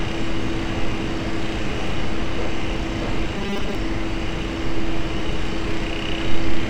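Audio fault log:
3.37–3.75 s, robotic sound from repeated short buffers: the sound hardens into a rigid, metallic buzz pitched at 200 Hz. The likely cause is audio arriving too seldom, so a 5 ms slice is looped to fill the gaps, with about half of the sound replaced by these repeats.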